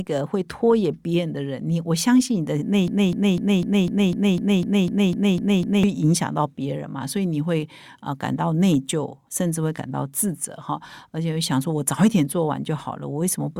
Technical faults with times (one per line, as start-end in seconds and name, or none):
2.88-5.83 broken-record loop